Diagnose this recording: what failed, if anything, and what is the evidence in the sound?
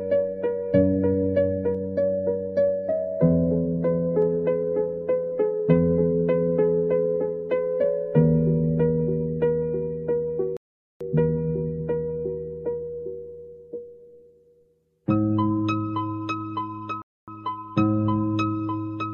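Channel delay (comb filtering) from 1.75 to 4.22 s: one channel lags the other by a fraction of a millisecond before the mono sum, cutting fixed notches from about 3 kHz. The notches stay put, unlike swirling codec artefacts.

Rebuffering stall at playback: silence from 10.57 to 11.01 s (0.44 s) and from 17.02 to 17.28 s (0.26 s). The sound resumes exactly where it stopped, so time is added rather than lost as in a dropout.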